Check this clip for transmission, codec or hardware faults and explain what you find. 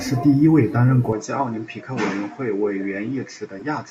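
Two faults are audible in this speech.

Input switched to a poorer device, from 1.13 s after "一位担任" to the end: the sound suddenly loses everything above 7.7 kHz, drops about 5 dB and gains faint new hiss, with no gap. The likely cause is a change to a narrower-band microphone.

Corrupt frame decoded, 3.59–3.63 s: the decoder played one damaged frame with misread data, producing a brief 32 ms blip peaking near -25 dBFS.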